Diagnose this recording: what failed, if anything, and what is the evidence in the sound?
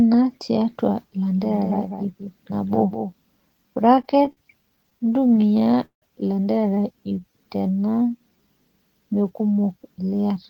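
From 1.34 to 3.12 s a full-band second copy of the speech trails about 200 ms behind the original, around 10 dB quieter, and starts and stops abruptly. This is a doubled audio track, likely from a slower second capture path or an edit at the routing or storage stage. Unlike room echo, the copy has no decay or reverberant colour.

Between 3.95 and 6.04 s the speech drags and stutters through 24 short stalls. The gaps reach up to 164 ms, and about 425 ms is filled in, roughly a fifth of that span. These are repeated stalls (stutter) at the network and jitter-buffer stage: late packets kept draining the buffer, and the receiver stretched the last sound, fading it in longer waits. Nothing is lost, which separates this from dropouts.

From 7.00 to 8.48 s the speech runs at about 85% speed with unchanged pitch, adding 236 ms. Sounds are drawn out. This is a jitter buffer slow-down: the receiver repeated pitch periods and pause fragments to rebuild its reserve. 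Tape-style slowing would lower the pitch, and this does not.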